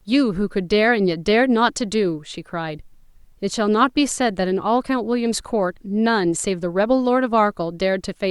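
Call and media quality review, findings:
Nothing stood out on listening to the speech in this clip.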